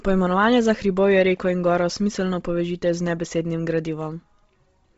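Throughout the speech, the signal has likely passed through Bluetooth LC3 compression at a low rate, consistent with about 24 kbps in 7.5 ms frames. Nothing survives above 7.7 kHz, and heavy noise-filled upper bands give consonants and vowels a breathy, grainy edge.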